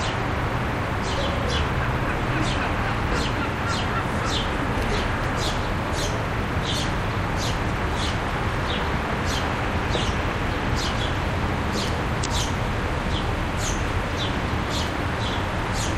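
At 12.22 to 12.26 s there is damaged data in the compressed stream. Corrupted bytes threw the decoder out of sync, forcing it to misread frames and hunt for the next valid header. The result is a brief glitch of about 44 ms.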